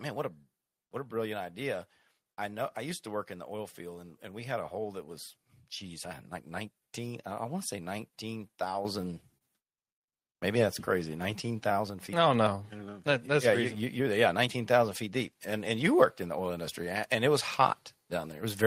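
Speech, with four kinds of fault in its middle stretch. At 8.85 s the microphone volume is stepped up by about 8 dB. Voice and background jump louder together, in one instant. A second, smaller step of about 3 dB follows at 12.34 s. This is the call software judging the microphone too quiet and raising the device's input gain in a single move, not a change in how the talker speaks.

From 9.01 to 10.03 s the audio stutters with repeated stalls. There are six short hold-ups in about a second. Together they fill 112 ms, and the longest is 39 ms. Nothing is lost. Packets were arriving late, so the jitter buffer kept running dry. Each time, the receiver stretched the last bit of sound until fresh audio came in. The speech drags and catches rather than dropping out.

From 11.33 to 11.74 s a jitter buffer slow-down takes hold. The speech plays at 91% speed with its pitch unchanged, and 46 ms of extra audio is added. 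The receiver was short of reserve, so it repeated single pitch periods and fragments of pauses to rebuild it. The result is drawn-out, slightly sluggish speech.

From 13.75 to 14.48 s the opposite happens, a jitter buffer speed-up. The speech runs at 108% speed, again at the same pitch. Roughly 70 ms is trimmed away in small pieces of one or a few pitch periods. The buffer held more audio than it wanted, so the receiver cut its delay back down. That stretch sounds hurried.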